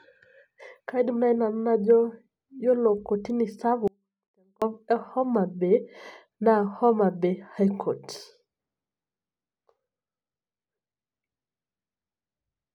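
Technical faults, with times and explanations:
3.88 to 4.62 s, audio dropout to a faint residue: the speech cuts out abruptly for about 0.74 s, leaving only faint sound roughly 40 dB below normal, likely a brief signal loss upstream while the path stayed live. The waveform collapses to a thin sliver with sheer edges, and the spectrogram shows a pale band across all frequencies.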